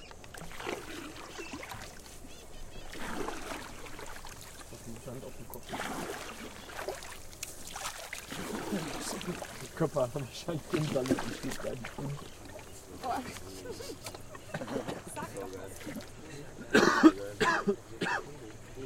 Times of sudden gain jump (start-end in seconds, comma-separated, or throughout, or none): 7.89-8.13